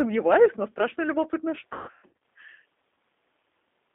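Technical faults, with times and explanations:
Throughout: G.729 codec. The speech sounds slightly rough and synthetic and is confined to roughly 250 Hz to 3.6 kHz. That fits an 8 kbit/s G.729A stream, which rebuilds each 10 ms frame from a vocal tract filter, a pitch predictor and a few pulses, with nothing passing above 4 kHz.
1.73 to 2.13 s: VoIP packet loss concealed by the speech codec. The speech turns smeared, fading in and out in gaps for about 0.48 s. The decoder repeats its last pitch and filter over about 390 ms of missing audio, the longest gap 150 ms, which fits around a dozen lost packets.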